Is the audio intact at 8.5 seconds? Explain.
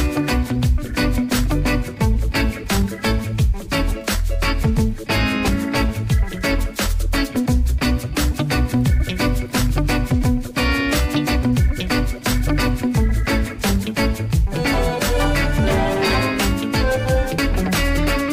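Yes, at 8.5 seconds the audio plays through cleanly, with no dropout, click, distortion or other fault to be heard at that point.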